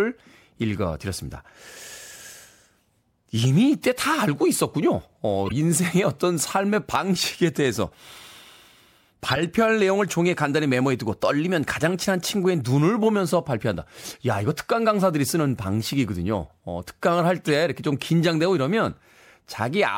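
Short chirps and noisy blips cut through the speech at 5.46–5.52 s, 7.56 s, 9.28–9.44 s (the longest), 11.89 s and 17.47–17.51 s. Each is a corrupt frame decoded: damaged compressed data, a few frames at a time, played anyway, throwing energy to wrong frequencies.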